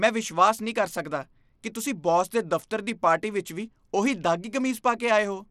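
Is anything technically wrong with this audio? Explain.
Yes. Throughout this speech there is plainly audible codec damage, most likely from Bluetooth SBC compression at a low bit pool, consistent with roughly 96 kbps. SBC splits the sound into a few wide sub-bands and hands out bits without a hearing model, so the upper bands are starved. The treble flickers and a gritty, aliased haze sits on the speech. A spectrogram shows nothing above 17 kHz and patchy, blocky energy in the top bands.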